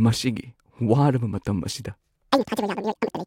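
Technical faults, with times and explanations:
2.32–3.27 s, audio read two samples at a time (double speed): just after "ꯃꯇꯝ ꯑꯁꯤꯗ", the speech jumps to twice its speed and an octave (12 semitones) higher. Each pair of samples is taken as one frame, so playback races ahead.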